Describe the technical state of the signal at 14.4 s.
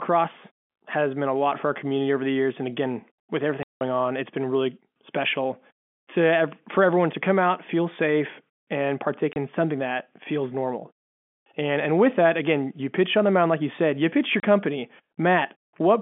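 At 14.4 s the speech drops out for 30 ms, to 14.43 s. This is packet loss filled with silence: one chunk of audio never arrived, consistent with a single lost 30 ms packet, and the receiver played digital silence instead. Unlike concealment, which would smear or repeat nearby sound into the gap, this hole is truly empty, and its edges are abrupt. The surrounding audio keeps the band-limited telephone sound of G.711 telephone coding.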